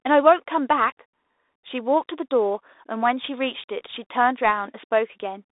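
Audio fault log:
throughout, Bluetooth CVSD headset codec: speech held to a 300 Hz to 3.7 kHz band, which fits a 64 kbps one-bit delta stream whose adaptive step lags loud highs, so s sounds turn scratchy over granular hiss. Spectrogram: hard ceiling near 3.8 kHz; waveform: stair-stepped, slope-limited edges.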